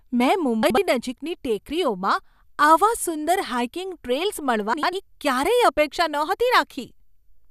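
Speech with frames out of order at 0.63–0.78 s, just before "નજીકની ટેકરીઓમાં આવા સુંદર", and at 4.73–4.93 s, after "આવા સુંદર હાઇકિંગ ટ્રેલ્સ". Adjacent blocks of 72 ms and 96 ms swap places, which fits runs of three or four 24 ms frames. The result is a garbled flutter, and no time is lost. A waveform shows abrupt discontinuities, and a spectrogram shows formant segments jumping out of sequence.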